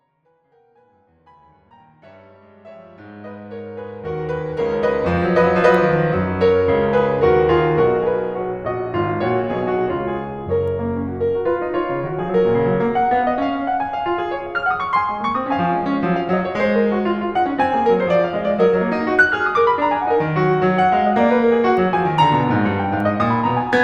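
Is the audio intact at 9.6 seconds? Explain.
Yes, the music is intact at 9.6 seconds, with no fault at that moment.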